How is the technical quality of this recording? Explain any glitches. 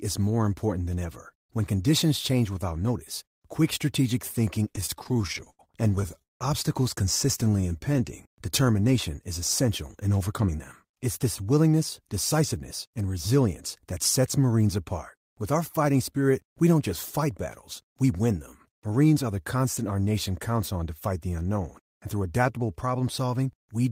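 The recording suffers from network playback glitches. There is one stretch of stuttering, one brief slow-down and three speed-ups.

From 4.73 to 6.42 s, just after "notice quick strategic thinking", the speech stutters through repeated stalls. Packets arrived late, and the jitter buffer ran dry over twenty times. Each time, the receiver stretched the last sound to cover the gap. These fills total 507 ms, about 30 percent of the span. The longest is 179 ms and is faded. Nothing is lost, but the speech drags and catches.

From 7.45 to 8.32 s, just before "determination is essential in", a jitter buffer slow-down occurs. The buffer was low, so the receiver repeated single pitch periods to rebuild its reserve. This adds 91 ms and plays the passage at 90 percent speed. The pitch stays the same. Sounds are drawn out.

Jitter buffer speed-ups occur three times. The buffer held too much audio, so the receiver trimmed short pitch-period pieces to cut the delay. 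From 10.32 to 13.05 s, between "determination is essential in" and "resilience that sets", speech runs at 106 percent, losing about a fifth of a second. The spans from 17.81 to 18.11 s and from 22.13 to 22.58 s run at 111 percent. Each loses a few tens of milliseconds. The pitch holds, but delivery sounds hurried.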